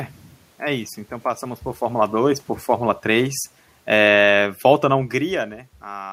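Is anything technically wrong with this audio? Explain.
Yes. From 1.9 to 5.15 s the speech and the room noise behind it sink together by about 5 dB: automatic gain falling, as the gain control lowers its gain.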